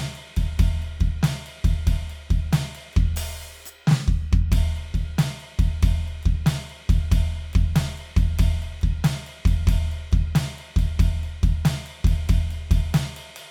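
No technical faults can be heard in this music recording.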